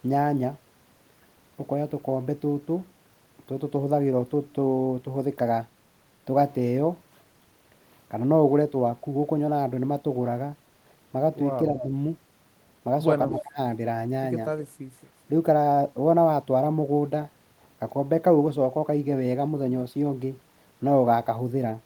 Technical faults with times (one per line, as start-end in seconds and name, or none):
11.71-11.91 speech suppressed in double talk
11.80-11.84 echo leak
13.29-13.58 speech suppressed in double talk
13.38-13.42 echo leak
14.97-15.01 echo leak